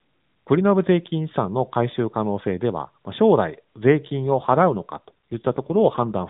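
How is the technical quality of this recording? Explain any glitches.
It's narrowband mobile speech, with nothing above about 4 kHz, and there's one glitch near the end.

From 4.38 s to 6.07 s you get an AMR rate drop. The band doesn't change and nothing cuts out, but the voice goes rougher and more buzzy and synthetic. The codec is clearly spending fewer bits on the vocal model, which fits the network stepping it down from the 12.2 kbps mode to 5.9 kbps, typically to free up bits for error protection on a weak link. It stays that way until just before the clip ends.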